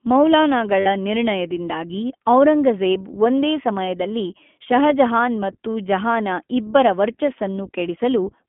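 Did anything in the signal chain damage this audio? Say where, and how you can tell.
Yes. The whole clip passes through the iLBC codec, a stage that hears as a narrowband telephone line. The speech is clear but plainly rough and slightly synthetic, and nothing sits outside roughly 200 Hz to 3.4 kHz, so there is no air or sibilant top. That band and texture point to iLBC's 15.2 kbps mode with 20 ms frames. Each frame's excitation is coded on its own at a low bit budget, which gives the grainy, processed edge.

Lost iLBC frames, a network fault, show up twice. From 0.80 to 0.88 s, just before "ನಿರ್ಣಯದಿಂದಾಗಿ ಔರಂಗಜೇಬ್ ಒಂದೇ", the sound briefly freezes into a held, faintly buzzy vowel, a gap of about 60 ms that fits three dropped 20 ms frames. A shorter blip at 3.86 to 3.89 s, right after "ನಿರ್ಣಯದಿಂದಾಗಿ ಔರಂಗಜೇಬ್ ಒಂದೇ", fits a single lost frame. The decoder fills each gap by repeating the last pitch cycle with noise. 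Because iLBC frames stand alone, the speech recovers almost immediately.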